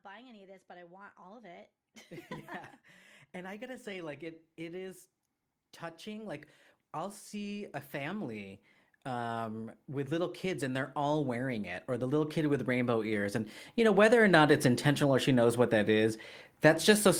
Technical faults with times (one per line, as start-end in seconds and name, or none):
0.05-1.77 automatic gain rising
3.33-5.01 automatic gain rising
5.80-15.30 automatic gain rising